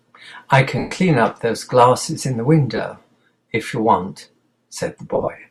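Lost LE Audio frames break the speech at 0.78 to 0.92 s, 2.76 to 2.79 s and 5.14 to 5.28 s. The decoder refills each gap by repeating the last spectrum with random signs. The speech smears into noise. The long first gap fades toward silence. The last is several short dropouts, none much over 20 ms.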